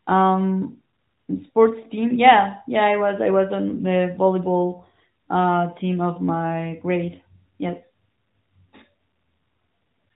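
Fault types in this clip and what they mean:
No faults are present; the signal comes through a narrowband mobile speech codec path that is working as intended, with its content limited to below 4 kHz.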